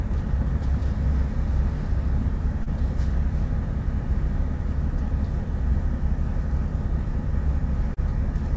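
At 2.63 to 2.69 s and again at 7.94 to 8.00 s there's short concealed packet loss: about 30 ms never arrived, so the receiver extended the preceding sound to cover it. You hear a brief smeared wobble before the real audio blends back in.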